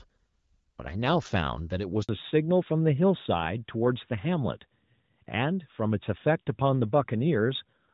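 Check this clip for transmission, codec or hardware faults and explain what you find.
Two faults occur together about two seconds into this speech clip.

Handover gap, 2.03 to 2.09 s: no speech frames arrived while the call switched networks, so the voice drops out into 60 ms of silence.

Fallback to narrowband, from 2.09 s to the end: the call drops from HD Voice to an older narrowband codec, which fits AMR-NB at 12.2 kbit/s. The clear wideband sound before the gap, consistent with AMR-WB at 12.65 kbit/s, loses everything above 4 kHz and turns duller and rougher.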